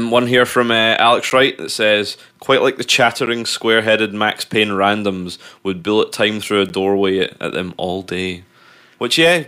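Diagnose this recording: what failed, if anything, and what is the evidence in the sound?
Looks like a driver or buffer underrun: three blocks of digital silence, each 10 ms, at 1.3 s, 3.26 s (after "says quite like the", before "square headed") and 6.69 s (after "bullet time through a"). The output wasn't filled in time, so samples dropped to zero, and each gap, being under 15 ms, is heard as a tick rather than as silence.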